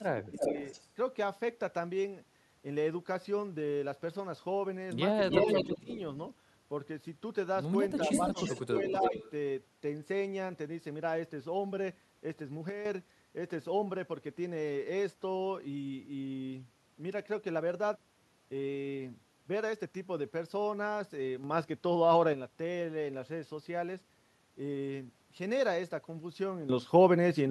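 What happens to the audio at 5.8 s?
An echo canceller likely failed to remove loudspeaker pickup, so an echo leak from 5.26 to 5.97 s returns a copy of the speech about 321 ms late, somewhat louder than the speech itself. The same canceller likely confused both talkers, causing speech suppressed in double talk from 5.65 to 5.88 s: the speech dips by up to roughly 20 dB over about 150 ms in total.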